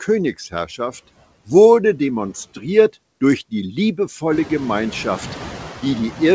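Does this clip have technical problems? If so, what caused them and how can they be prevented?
Yes. Noise suppressor artifacts run through the whole clip. The suppressor treats the room's steady background as noise and pulls those bands down by about 11 dB frame by frame. The noise dips in the gaps and swells back under the speech. This gets more obvious once the room noise climbs by about 14 dB at around 4.5 s. On a spectrogram the noise floor looks patchy and blotchy, gated in step with the speech, and a waveform shows pauses where the floor dips lower rather than staying steady. The audio has nothing above 8 kHz, which fits a wideband call codec such as G.722. To prevent this, reduce the room noise at the source and use a gentler or adaptive suppression setting.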